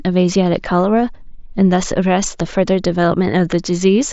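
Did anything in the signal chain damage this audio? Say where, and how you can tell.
No, nothing in the chain damaged it.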